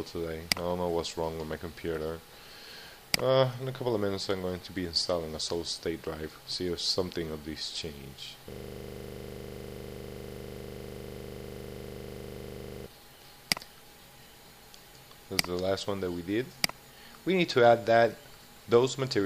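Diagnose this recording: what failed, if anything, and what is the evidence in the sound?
System hang loop at the driver or buffer stage: from 8.52 to 12.86 s, one frozen 40 ms buffer replays as a 25 Hz buzz, with identical waveform cycles and 25 Hz-spaced spectrogram lines.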